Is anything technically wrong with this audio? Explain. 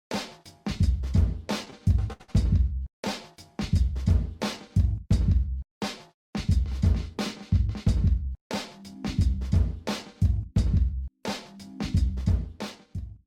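Yes, there are two kinds of fault.

At 1.70 to 1.75 s, and again in two back-to-back runs from 2.13 to 2.22 s and 2.22 to 2.30 s, the sound hangs on a moment too long, with a faint buzzy or dipped quality. These are short stalls from a late packet. The jitter buffer ran dry, and the receiver stretched the last audio for 22 ms, then 70 ms and 65 ms, until data arrived. Nothing is skipped, but the delay grows by the same amounts.

From 8.15 to 8.95 s the sound runs slightly hurried, about 7% fast, while the pitch stays the same. This is a jitter buffer speed-up. The buffer was holding more audio than its target, so the receiver repeatedly removed tiny pitch-period-sized slices, around 70 ms in total, to pull the delay back down. The result is a brief, compressed stretch rather than an audible gap.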